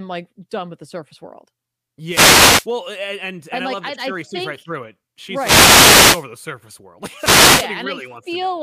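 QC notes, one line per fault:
2.08–2.67 s, 5.36–6.27 s and 7.16–7.70 s: wireless microphone noise hit, three bursts. The first comes right after "with the surface world" and clears before "and and and I". The second ends just before "the surface world", and the third starts just after a later "the surface world". Each is a brief swish of static over the speech: reflections cancel the analogue FM radio signal, the link fades, and the receiver's own noise rises through the audio.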